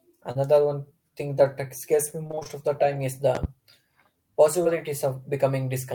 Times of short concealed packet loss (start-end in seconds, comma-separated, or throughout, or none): 0.31-0.37, 4.63-4.67